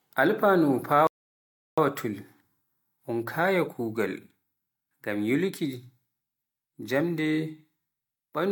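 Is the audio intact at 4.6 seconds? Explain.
Yes, the speech at 4.6 seconds plays through intact, with no dropout, glitch or distortion at that moment.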